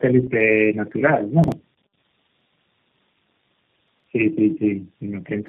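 Throughout, the speech sounds rough, muffled and warbly, with nothing above 3.8 kHz. This is tandem speech coding: the sound was decoded and re-encoded by several speech codecs in series, which fits around four passes, each coder compounding the last one's damage.

From 1.44 to 1.52 s, and again from 3.88 to 4.04 s, there is a brief jumbled moment. These are chunks out of order: 40 ms blocks played one and then three chunks late, leaving hard joins.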